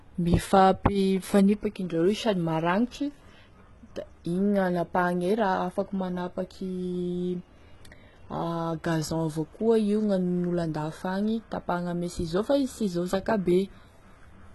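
A low-bitrate encode, likely HE-AAC compression, runs through the whole speech recording, with the codec carrying only the lower spectrum and rebuilding the treble by copying lower bands upward under a coarse envelope. The damage is heavy and fits a rate around 16 kbps. The upper range sounds synthetic, with harmonics that fail to line up, so s sounds turn gritty and lispy, and nothing at all comes through above about 11.8 kHz.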